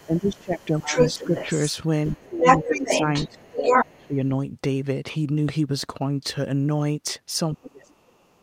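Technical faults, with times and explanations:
0.0–1.7 s and 2.06–4.07 s: other side's voice leaking through. A second voice sits about 5 dB under the talker, then about 5 dB over it, likely residual loudspeaker echo the canceller missed.
0.06–1.34 s, 2.12–4.18 s and 7.54–8.42 s: speech suppressed in double talk. The talker dips by about 15, 20 and then 35 dB, likely the canceller attenuating everything during overlap.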